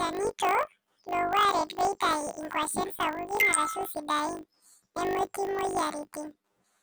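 Throughout, the speech has a robotic 50 Hz buzz: planar audio read as interleaved, with 20 ms blocks each squeezed to double speed, left then right.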